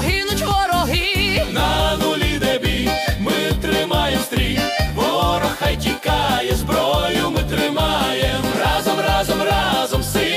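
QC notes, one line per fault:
No faults heard anywhere in this audio.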